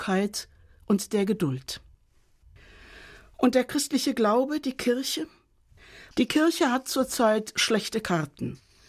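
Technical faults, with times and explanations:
No technical faults are evident in this speech recording.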